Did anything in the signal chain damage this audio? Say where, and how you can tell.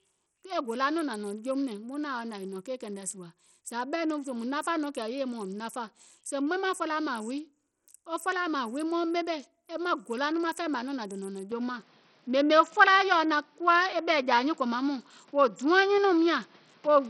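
Yes. The codec stage damaged the whole 17-second speech clip. Nothing survives above 16.9 kHz, and the upper bands sound gritty and flickering, with heavy quantisation noise and some aliasing. This is what Bluetooth SBC compression sounds like at a low bit pool, most likely around 64 kbps. SBC's fixed sub-bands and crude bit allocation starve the treble bands first. That is why the damage is spread across the whole top end, where a plain low-pass filter would give a clean cutoff with no grit.

The input stage also changed partway through. From 11.52 s, right after "dònȧŋ nɔ̀ŋ", until the end at 17.10 s, the sound turns duller and boxier, with nothing above 7.6 kHz. The level shifts by about 5 dB and a new noise floor appears, roughly 35 dB below the speech. There is no gap at the change. This is an input switched to a poorer device, likely a headset call profile taking over. The sudden step in tone, level and noise all at once marks a hardware change.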